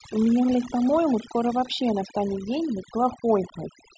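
Noise reduction set far too aggressively runs through the whole clip, switching individual frequency bands down or off whenever they sit near its noise estimate. This is overdone noise removal: the background collapses into near silence scattered with twinkling specks, while quieter parts of the speech get stripped away.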